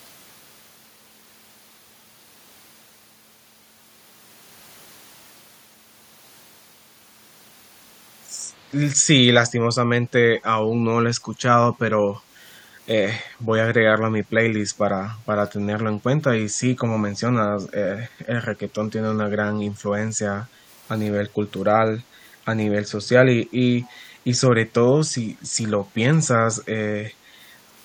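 At 12.2 to 12.32 s the room sound behind the speech suddenly sinks by about 7 dB for roughly a tenth of a second, then comes back. This is background gated by the echo canceller. While the far end's audio was coming out of the loudspeaker, the canceller pulled the microphone down hard to keep that playback from being sent back. The ambience went with it, leaving a brief hole until the canceller released.

From 23.83 to 23.93 s a faint, delayed copy of the speech trails in underneath, arriving 186 ms behind the original and sitting far below it in level, so it registers as a ghostly scrap rather than a clear repeat. This is most likely an echo leak. A speakerphone's echo canceller failed to strip out all of the loudspeaker sound its microphone picked up, and the remainder was transmitted back down the line.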